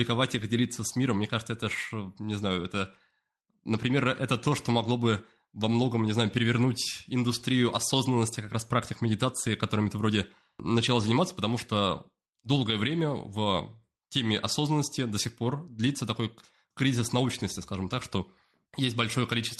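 No faults to report in the speech: the call-path coding shows as its usual coding noise and a top end rolling off near 12 kHz, consistent with Opus at around 32 kbps.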